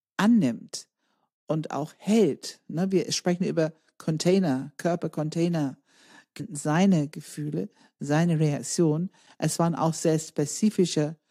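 At 6.39 s the speech jumps ahead abruptly, with a brief blip at the join. This is likely a stream segment skipped: one chunk of the stream failed to load, and playback carried on from the next chunk, dropping that stretch of speech.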